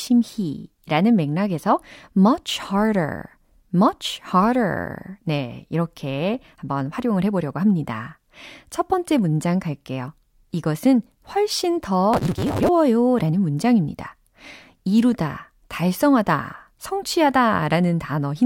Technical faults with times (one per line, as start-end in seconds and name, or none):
12.13-12.69 block size mismatch (truncated)